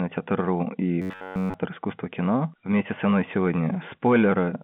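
From 1.02 to 1.54 s, audio likely arrived too seldom, so an 11 ms slice looped: robotic sound from repeated short buffers, a rigid 93.8 Hz buzz.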